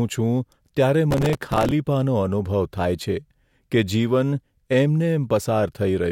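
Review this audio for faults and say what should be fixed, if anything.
Processor overload crackle from 1.11 to 1.72 s: dozens of few-millisecond buffers missed their deadlines and replayed stale audio, producing gritty tearing. Prevent it by reducing processing load or enlarging the audio buffer.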